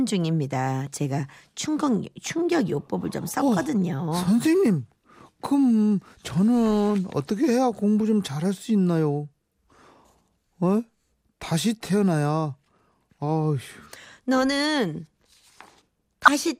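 Speech, with a brief burst of burbling from 16.22 to 16.34 s: DAB burbling, where weak reception lets bit errors corrupt sub-band levels across a handful of MP2 frames.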